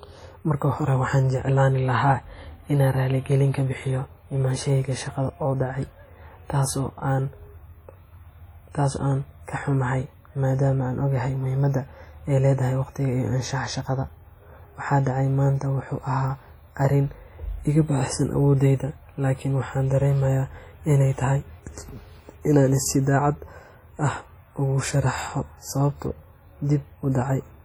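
WMA compression, heard throughout the speech, is the likely cause of the damage here, and it is heavy. The audio rings and smears, with a washy hiss that swells and recedes along with the speech, because quantisation noise is spread across long transform blocks spanning tens of milliseconds. Quieter spectral detail drops out where the encoder zeroed weak components, which fits an early WMA encoder running at a low bitrate of around 32 kbps.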